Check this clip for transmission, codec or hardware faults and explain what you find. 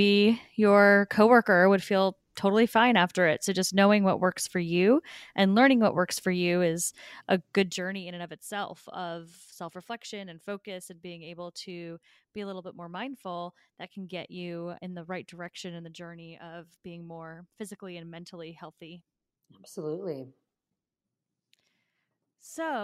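One fault shows up in this speech: zipper noise from 7.58 to 8.08 s, between "for you is a" and "in and of itself". The level drops by roughly 15 dB in 1 dB jumps, about fifty per second, with no smoothing. Each jump leaves a tiny click, so a fine ticking rides on the sound as it falls. That stepped texture is what separates this one from a smooth level change.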